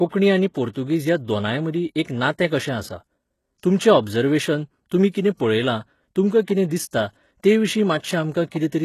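A speech clip that was likely squeezed through HE-AAC compression at a very low bitrate, around 16 kbps by the sound of it. The codec keeps only the lower spectrum and synthesises the treble by copying bands upward, so sibilants turn gritty and metallic, with plainly audible damage and nothing above 12.3 kHz. Pre-echo also comes from the codec smearing quantisation noise across each transform block ahead of sharp attacks. A short hiss precedes onsets at 0.73–0.76 s, at 5.11–5.14 s just after "तुमचें ओबजर्वेशन तुमी", and at 5.35–5.40 s just before "पळयलां तुमकां कितें". These spreads run 29 to 48 ms and leave the attacks soft.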